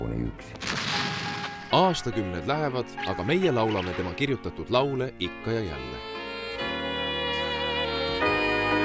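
No technical faults are audible.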